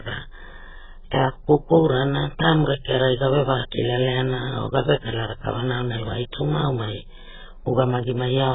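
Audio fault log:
Throughout: AAC compression. The speech sounds dull and smeared, with nothing above 3.8 kHz. Sibilants and held vowels warble and fizz. The likely cause is heavy AAC-LC coding at a starved rate, fitting about 8 kbps, which forces a low cut-off and patchy, coarse spectral detail.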